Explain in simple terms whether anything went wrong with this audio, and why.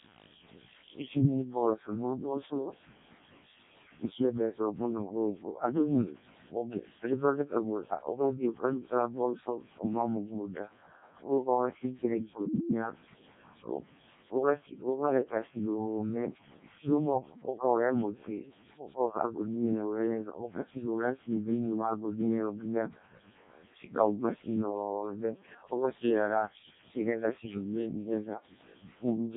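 The speech went through a Codec 2 vocoder, which rebuilds voices from sine waves. For the whole clip, speech sounds robotic, buzzy, heavily damaged and dull.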